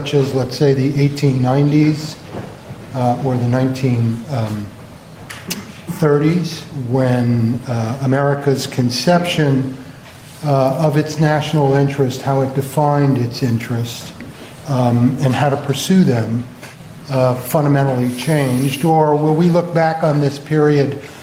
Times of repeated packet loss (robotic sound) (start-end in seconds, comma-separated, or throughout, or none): none